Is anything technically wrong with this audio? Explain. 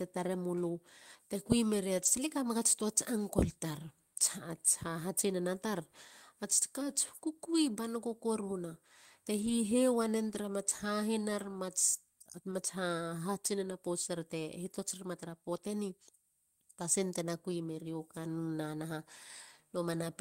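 Yes, there are four spots where lost packets were rebuilt from error correction: at 1.97 to 2.07 s just before "kamegats tuats", at 9.37 to 9.51 s after "kukui banoko koruna te", at 10.29 to 10.39 s, and at 12.51 to 12.53 s. The decoder filled each gap with a low-bitrate copy carried in the next packet, so the speech never drops out. Instead, those 20 to 80 ms stretches sound briefly rougher and noisier.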